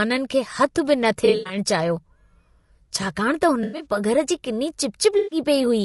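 From the start the speech is rough and grainy, with noise filling the gaps between harmonics and a thin, synthetic top end. That's the sound of low-delay AAC compression, likely AAC-ELD at a rate that fits about 32 kbps. Its short frames can't resolve pitch harmonics cleanly, and at that rate there aren't enough bits to keep the spectrum tidy, so the damage is plainly audible.

On top of that there are three patches of AAC frame loss with concealment. The first runs from 1.25 to 1.57 s, right after "खे हथु बि न". Around 180 ms goes missing, scattered across roughly 240 ms, with the longest gap about a tenth of a second. The decoder patches the holes by reusing the last good spectrum, so it comes out smeared and phasey. The second, from 3.63 to 3.85 s after "छाकाणि त", sounds the same over a shorter stretch. The third is at 5.18 to 5.39 s, with about 140 ms lost, and it has the same noisy smear.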